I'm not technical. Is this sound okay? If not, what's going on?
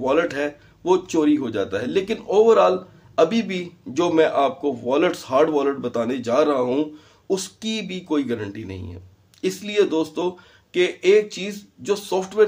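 Yes, nothing in the recording points to a technical problem.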